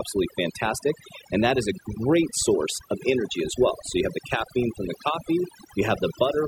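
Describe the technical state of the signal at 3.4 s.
Overdone noise removal is present at 3.4 s, as it is across the whole clip. A noise reduction stage pushed too hard is suppressing individual frequency bands whenever their level sits close to its noise estimate, and the quieter components of the speech are being cut along with the noise. The background drops and is speckled with twinkling artefacts.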